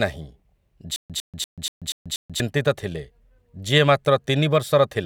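Stutter with silent gaps from 0.96 to 2.4 s: a 103 ms fragment of speech repeats six times, each followed by 136 ms of digital silence, likely a stalled stream.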